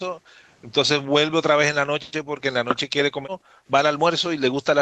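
Background gated by the echo canceller at 0.22 to 0.44 s (about 15 dB dip) and 3.29 to 3.67 s (about 40 dB, near dropout) in this speech: the canceller clamped the microphone while the far end played, then released.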